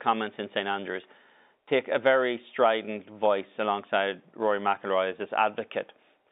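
No technical faults are present in this telephone speech.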